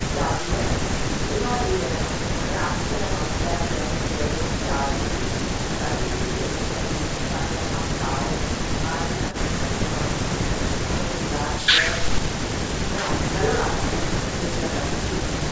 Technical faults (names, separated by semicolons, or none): none